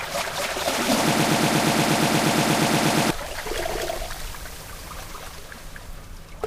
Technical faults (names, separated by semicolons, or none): broken-record loop